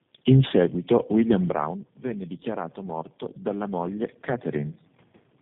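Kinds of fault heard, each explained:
Tandem speech coding: The call passed through a chain of links that each decoded the audio and re-encoded it with their own codec, so three low-rate speech coders worked in turn on one another's output, a pattern consistent with GSM full rate followed twice by G.729A. The errors stack up, so the speech sounds rough, muffled and warbly throughout, and nothing reaches above about 3.8 kHz.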